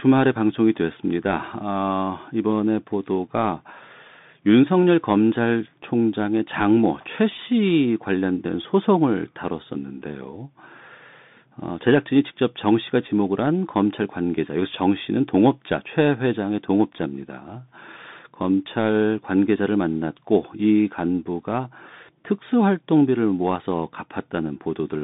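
Throughout, the speech carries a Bluetooth CVSD headset codec: a one-bit delta coder whose adaptive step lags fast, loud changes, which fits a 64 kbps stream. S sounds turn scratchy over granular hiss. A spectrogram shows nothing above 3.8 kHz and little below 150 Hz.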